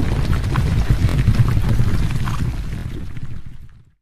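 The audio has two kinds of fault. The first is a repeated buffer, heard twice: from 1.09 to 1.14 s and from 2.79 to 2.83 s. Each time, one short piece of sound plays three times in a row, with a hard join at every repeat. Each piece lasts about 23 ms, which fits a 1024-sample buffer. New audio did not reach the output in time, so the device played the last buffer twice more. The result is a brief stutter, and about 50 ms of real audio goes missing each time. The second fault is damaged data in the compressed stream, at 1.72 s. It is a short blip or chirp. Part of the encoded data there was corrupted. The decoder misread those bytes, lost its place in the stream and had to find the next valid frame before normal playback resumed.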